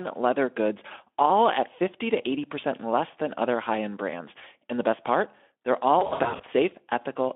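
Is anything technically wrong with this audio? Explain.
Yes. From 5.99 to 6.44 s the speech turns buzzy or noisy, smeared and weak: VoIP packet loss concealed by the speech codec, which fills the scattered gaps of up to 60 ms with fading extrapolation.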